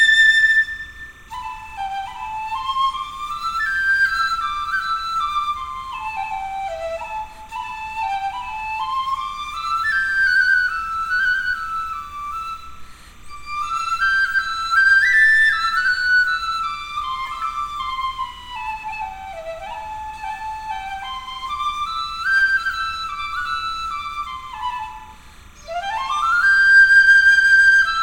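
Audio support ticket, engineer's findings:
Timecode bleed throughout, steady chirping warble near 1 and 2 kHz, about 30 dB under signal; LTC at 30 fps leaking from adjacent track or cable. Rhythmic two-tone switching distinguishes it from steady hum or whine.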